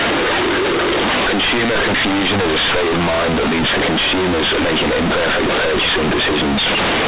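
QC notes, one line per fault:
Throughout, companded audio read as linear: the speech is very loud and harshly buzzy, with heavy noise in the pauses. Mu-law bytes are played as plain 8-bit samples without expansion, so each sign change swings half the range and quiet sounds land as hard as loud ones.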